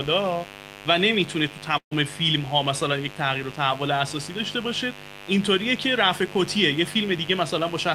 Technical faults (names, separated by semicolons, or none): mains buzz; burst of packet loss